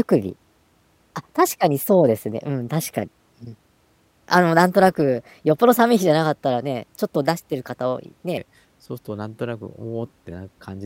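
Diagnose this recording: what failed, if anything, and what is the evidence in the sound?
From the start to 8.37 s the speech runs hurried and raised in pitch, about three semitones high, then drops to its natural rate. This is a section at the wrong speed, 1.19 times too fast, likely from an edit or playback stage resampling against the wrong clock.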